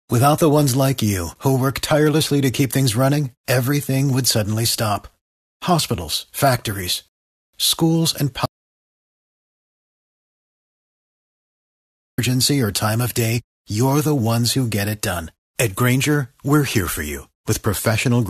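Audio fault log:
7.08–7.54 s, rebuffering stall: the speech halts and resumes at "schools and", picking up exactly where it broke off, with nothing missing. The pause is the player emptying its store of downloaded audio and waiting for more data before continuing. Because playback simply freezes instead of skipping ahead, the stall adds about 0.45 s of silence to the running time without removing any of the recorded material.
8.46–12.18 s, audio dropout to silence: right after "factories schools and" the speech cuts out mid-flow into silence, with no room tone underneath, and returns at "or time of day". Unlike the stall, the missing stretch is gone for good, about 3.48 s of material. The likely cause is that the input signal was lost, through a disconnected source, a broken link or an accidental mute, while the recording carried on writing silence.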